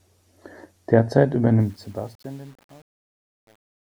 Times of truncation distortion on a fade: 1.60-3.90

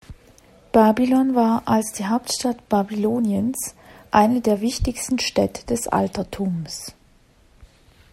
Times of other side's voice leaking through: none

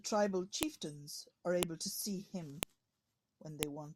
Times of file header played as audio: 0.63, 1.63, 2.63, 3.63

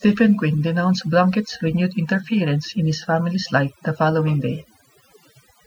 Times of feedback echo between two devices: none

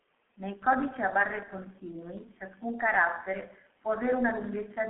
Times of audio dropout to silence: none

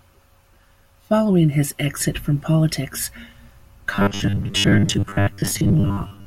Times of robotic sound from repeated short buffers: 3.91-6.26

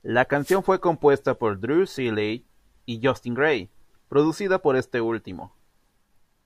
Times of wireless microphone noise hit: 0.39-0.61

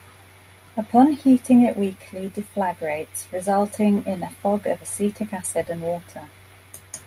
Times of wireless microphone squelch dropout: none

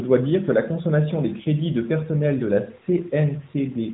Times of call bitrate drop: none

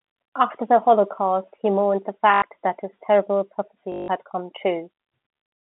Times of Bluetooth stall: none

